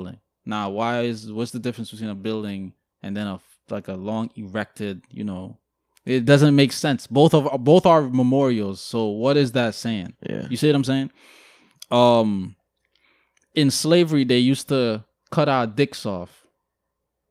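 Nothing goes wrong anywhere in this stretch of speech, so there's no technical fault to point to.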